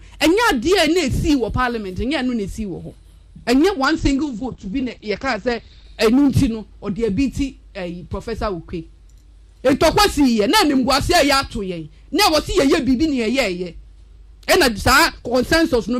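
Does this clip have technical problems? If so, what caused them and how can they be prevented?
Yes. From 3.85 to 5.85 s the adaptive stream switches to a lower bitrate. Everything above 8.8 kHz disappears and codec artefacts thicken abruptly, which fits a fall from about 64 to about 16 kbit/s Opus. A larger playback buffer or a higher minimum-bitrate floor would prevent the switch.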